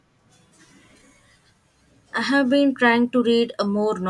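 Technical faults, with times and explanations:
No technical faults can be heard anywhere in the speech signal.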